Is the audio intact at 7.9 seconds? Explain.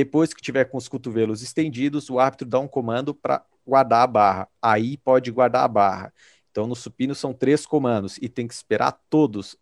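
Yes, at 7.9 seconds the audio runs on intact, with no dropout, click, distortion or other fault at that point.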